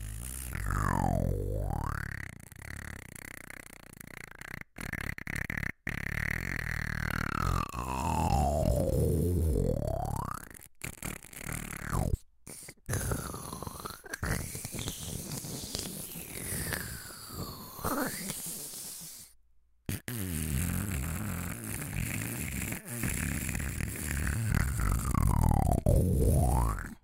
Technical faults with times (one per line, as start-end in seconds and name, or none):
0.00-27.04 crude rate conversion